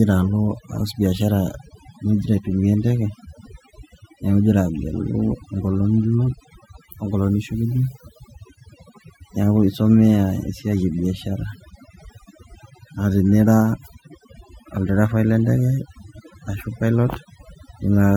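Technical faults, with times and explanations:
Throughout, overdone noise removal: noise reduction set far too strong mutes frequency bands near the noise floor, leaving near-silent twinkling gaps and taking quiet parts of the speech with them.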